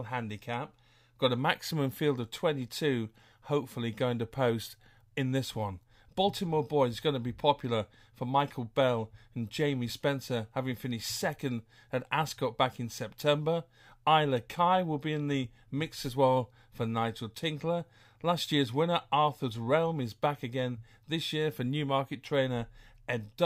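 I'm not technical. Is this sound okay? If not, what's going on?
Yes, nothing in this speech recording points to a technical problem with how the sound was captured, stored or played back.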